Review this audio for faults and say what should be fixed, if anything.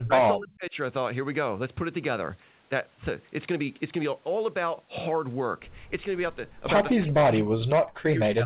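The speech drops out in three spots: right at the start up to 0.12 s, again from 0.34 to 0.76 s, and from 6.93 s through to the end. The dips go down by about 30 to 40 dB, so the talker's audio almost vanishes. That pattern looks like speech suppressed in double talk. The echo canceller likely couldn't tell this talker apart from the far side's echo and clamped down on both. To prevent it, tune the echo canceller's double-talk detection, or use better speaker and mic isolation, so it doesn't suppress near-end speech. The band stops at 4 kHz, which fits a G.711 mu-law call path.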